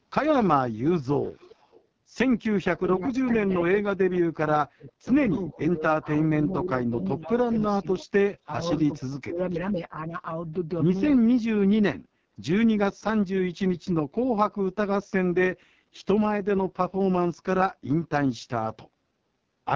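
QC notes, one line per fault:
Throughout, AMR wideband (HD Voice) codec: heavy damage at 6.6 kbit/s, the codec's lowest rate, so the speech comes through rough and raspy.
1.0 to 1.83 s and 8.97 to 9.03 s, echo leak: a faint copy of the speech trails about 0.39 s behind, roughly 30 dB down. It's likely the far end's echo canceller letting some loudspeaker pickup back through.
2.75 to 5.14 s, 5.52 to 8.65 s and 8.97 to 10.12 s, speech suppressed in double talk: the speech dips in patches, roughly 40, 15 and 30 dB at its deepest. That's likely the canceller ducking everything while both sides talk at once.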